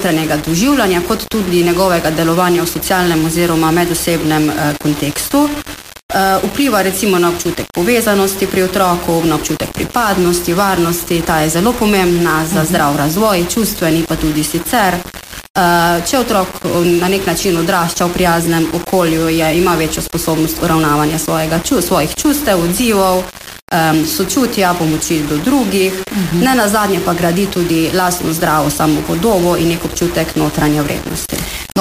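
From the start to the end, the sound is grainy and harsh. Quiet passages turn gritty, and the faintest parts sputter or drop out. The likely cause is low bit depth without dither, about 4 bits with plain rounding. The resulting error sits only about 15 dB below the signal and follows it.

At 27.70 s there is a tiny skip. This is an overlap between stream segments, which fits 6-second segments. The player trimmed a small piece of real sound, about 13 ms, so the waveform jumps abruptly.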